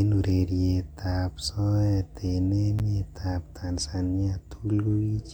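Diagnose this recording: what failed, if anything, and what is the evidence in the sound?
The failure is at playback, where a segmented stream is joined back together: a gap between stream segments at 2.79 s. The speech stops dead for about 10 ms, with hard edges on both sides, and then carries on exactly where it left off. The timestamps of adjacent segments, which point to one-second segments, leave a small hole that the player fills with silence. Unlike a packet dropout, nothing is missing: time is inserted, not audio removed.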